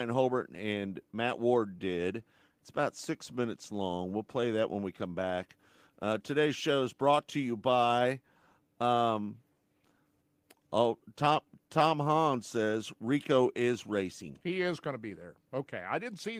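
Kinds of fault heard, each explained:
Clock drift between sender and receiver: The sending clock runs roughly three percent slow. The receiver's buffer keeps draining, so small timing hiccups recur unevenly throughout this speech.
Repeated timing corrections: From 0.06 to 16.37 s, short pieces are repeated to keep pace. Playback runs at 98% speed, adding about 0.4 s overall.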